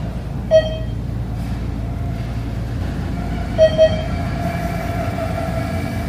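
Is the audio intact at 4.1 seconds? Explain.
No. From 2.81 s to the end, every sound is followed about 200 ms later by an equally loud, full-band repeat with no decay, a doubled audio track. It likely comes from the audio being captured again by a slower path.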